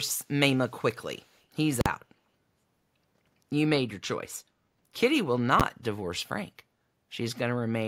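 From 0.56 to 0.84 s and 1.15 to 1.42 s, a faint copy of the speech trails by 173 ms, roughly 40 and 35 dB down, likely an echo leak from an incompletely cancelled loudspeaker path. From 1.81 to 1.86 s, invalid numbers at full scale pin the output for about 46 ms, fitting a 2048-sample block, giving loud pops at its edges. At 5.60 s, a roughly 12 ms block does the same as a single bang.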